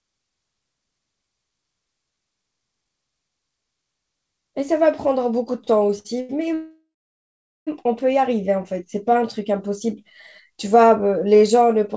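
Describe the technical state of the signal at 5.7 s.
At 5.7 s the jitter buffer keeps running dry: from 5.64 to 6.53 s packets arrive too slowly, so the receiver four times extends the last sound, for up to 83 ms. This is repeated stalls (stutter). Nothing is lost, but the speech drags and hiccups.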